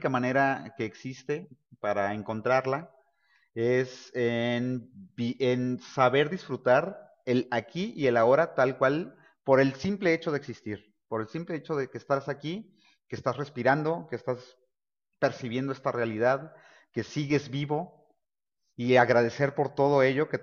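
No technical fault can be heard anywhere in this speech recording.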